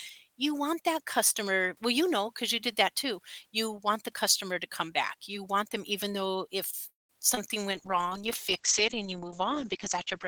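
Right after "them even though if", at 6.89 s, the speech stalls until 7.11 s in what sounds like a call audio freeze: the last sound trails off into roughly 170 ms of silence, likely a jitter buffer running dry while packets were held up. Nothing is lost; the speech just resumes about 0.2 s late.

Just after that come two short concealed packet losses, at 7.29 to 7.33 s and 7.35 to 7.39 s. Each drops about 20 ms of audio that the decoder patches by extending the previous sound, so you hear a quick smear or wobble twice in close succession.

From 7.73 s to the end there's a call bitrate drop, with the encoder cut from 32 to 9 kbps and the audio band narrowing from 20 kHz to 8 kHz. The speech turns muffled, rough and watery for the last 2.5 s.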